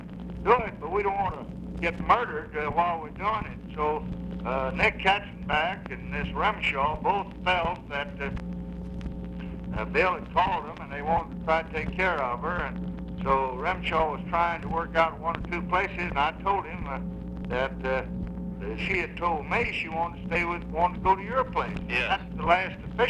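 No technical faults can be heard anywhere in this audio.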